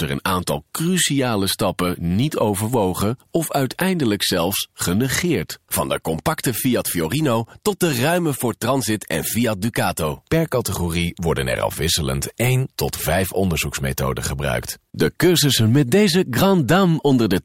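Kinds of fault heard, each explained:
Bit error spike: a flipped bit corrupts a single sample, which jumps and snaps straight back, leaving sharp broadband ticks at 7.45 s and 16.82 s.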